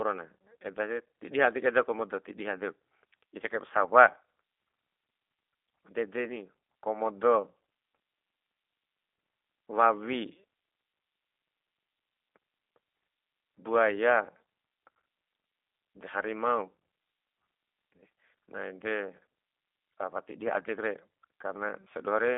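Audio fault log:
throughout: G.729 codec. The speech sits in a narrow telephone band, 250 Hz to 3.6 kHz, with nothing above 3.7 kHz. A plainly audible rough, synthetic edge comes from rebuilding each frame from a filter, pitch predictor and sparse pulses, which fits G.729A at 8 kbit/s.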